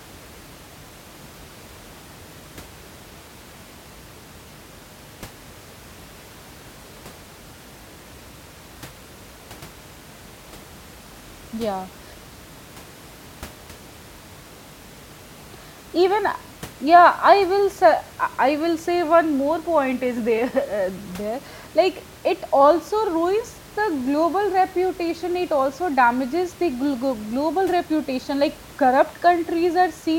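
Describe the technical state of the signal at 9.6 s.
At 9.6 s the signal is intact, with only the room's own background noise sitting about 23 dB below the speech.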